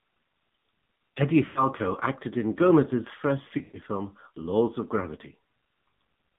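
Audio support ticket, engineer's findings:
AMR narrowband mobile codec, whole clip. Speech band-limited by 8 kHz sampling, nothing above 4 kHz; vocal-tract model with sparse pulse excitation leaves the speech plainly buzzy and synthetic, consistent with a low-rate mode near 7.4 kbps. Dull, boxed-in speech throughout.

Sample clock jitter, whole clip. Converter clock timing wanders by around a microsecond, so samples land early or late; error scales with waveform slope. Faint roughness riding on louder, brighter speech, roughly 50 dB below the signal, gone in pauses.

Lost AMR speech frames, 1.46–1.66 s, just before "acted in". Radio errors failed frame checksums; decoder repeated last good pitch and vocal tract settings at falling gain for about 100 ms, pointing to some five frames. Speech smears, fades toward silence, returns weak.

Lost AMR speech frames, 3.58–3.78 s. Losses totalling about 140 ms scattered over 160 ms, longest run 120 ms, so concealment stretches then decays. 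Drawn-out warble sliding to near silence, rough recovery afterwards.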